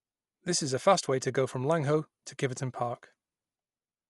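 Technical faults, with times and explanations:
Throughout, likely Dolby Digital compression: speech sounds dull with nothing above 11.4 kHz, and a rough, fluttering noise fill around tones, consistent with a 64 kbps encode.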